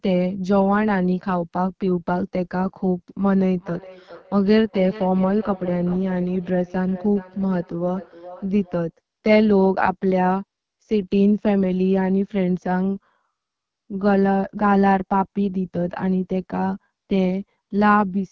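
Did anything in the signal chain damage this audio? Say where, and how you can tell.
Yes, two things. First, the codec stage: the whole clip has the rough, raspy grain of the AMR wideband (HD Voice) codec running at one of its lowest modes, which fits 8.85 kbit/s. At that rate the pulse-driven vocal tract model can't describe the speech finely enough, so the lower band turns buzzy and gritty, and the top end up to 7 kHz is just shaped noise standing in for real detail.

Second, acoustic feedback echo between two devices from 3.36 to 8.92 s. The speech comes back about every 0.4 s, peaking at about 18 dB below the direct sound, and each pass sounds thinner and more ringy than the last. Two devices in the same room are on the call: one plays out what the other's mic sent, that mic hears it again, and neither echo canceller can remove sound it didn't play itself.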